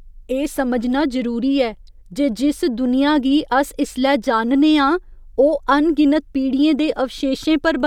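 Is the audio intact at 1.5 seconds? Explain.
Yes, the speech at 1.5 seconds plays through cleanly, with no audible fault at that moment.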